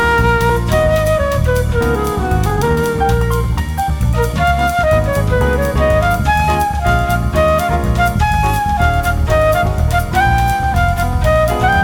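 At 0.49 s there is a skip ahead: roughly seven-tenths of a second of audio is dropped with no fill. The playback jumps straight to later material with a near-seamless splice. The waveform shows an abrupt change of envelope at the join, and the spectrogram shows an unbroken vertical seam.

Jitter buffer speed-up follows in three bursts, at 2.48–3.04 s (129% speed), 3.60–3.91 s (113%) and 4.43–4.87 s (112%). The buffer trims repeated pitch-period-length pieces to shed excess delay, about a fifth of a second in the first burst and a few tens of milliseconds in each later one. The sound turns hurried while its pitch stays the same. On a spectrogram, the harmonic lines keep their spacing but the features are compressed in time.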